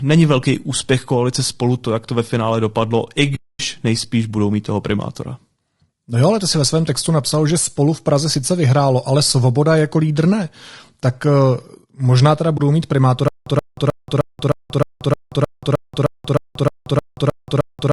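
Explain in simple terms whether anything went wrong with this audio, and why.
Throughout the clip, the speech was squeezed by a low-delay codec, likely AAC-ELD, the kind used for video calls. Its short frames capture the pitch of the voice poorly, so the speech sounds rough and grainy, with a hiss between tones and a thin, artificial-sounding top end.

AAC frame loss with muting happened twice. Pieces of the stream went missing, and the decoder filled them with silence. From 3.35 to 3.60 s, between "ve finále dopadlo i" and "nejspíš budou mít toho", about a quarter second fades out and back in. A much shorter hole follows at 12.57 to 12.60 s, just after "možná teda".

A stutter with silent gaps begins at 13.28 s and lasts to the end. The playback likely stalled, and at each retry it replayed the same short fragment. That 0.13 s burst repeats about every 0.31 s, 15 times in all, with dead silence between repeats. 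The speech that should have played there is lost.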